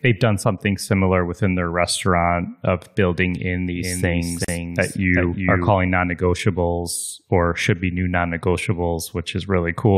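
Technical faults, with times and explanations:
3.76–5.70 s, doubled audio track: Most likely a second, slower capture path or an edit that left two copies out of step fed the same speech into the mix twice. Right after "restaurant of building in", a full-band echo of the speech follows roughly 0.4 s behind, about 5 dB quieter than the original, with no decay or room colouring. It starts and stops abruptly, so the speech sounds stacked on itself.
4.45–4.48 s, gap at a join of encoded pieces: Two separately encoded pieces were spliced without trimming, leaving one run's end-of-stream padding and the next run's start-up silence in place. This opens a 38 ms hole in the running speech, inside the doubled stretch. Its edges are smeared by the codec, and the speech resumes exactly where it broke off rather than skipping ahead.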